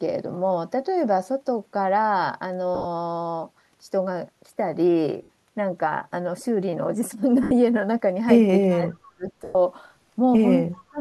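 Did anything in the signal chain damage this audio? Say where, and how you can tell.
Yes. Lost LE Audio frames on the Bluetooth link, at 2.75–2.86 s, 5.23–5.29 s, 7.43–7.51 s and 9.44–9.56 s. The first gap is 70 ms scattered over 100 ms, with the longest run around 40 ms. The others lose 60, 80 and 110 ms, which fits 10 ms frames. The LC3 decoder filled each gap by reusing the last spectrum with random signs and fading it. On a spectrogram this shows as smeared, noisy bands without harmonic structure. In the waveform the level sags through the longer gaps.

An echo leak in call processing sits at 8.70–8.76 s. A faint delayed copy of the sound arrives 381 ms late, about 20 dB below the direct speech. It is likely that the loudspeaker side's echo canceller let loudspeaker pickup through. On a spectrogram it appears as a weak duplicate of earlier formant patterns.

Speech suppressed in double talk follows from 8.76 to 9.24 s, affecting roughly 400 ms, and again from 10.90 s to the end. 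The level dips by up to about 30 dB. The likely cause is the echo canceller attenuating the talker while the other side was speaking. In the waveform the envelope dips.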